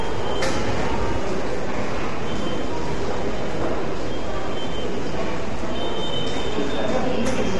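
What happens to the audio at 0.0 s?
From 0.0 s to the end, the whole waveform sits shifted off zero by a constant amount. This is a DC offset. It cannot be heard as a sound. It eats into headroom and shows as steady energy at the very bottom of the spectrum.

The audio is rough and grainy throughout, with noise filling the gaps between tonal components. Nothing is present above 11.5 kHz. This points to low-delay AAC compression, likely AAC-ELD. Its short frames resolve fine spectral detail poorly, and the damage fits a bitrate of around 32 kbps.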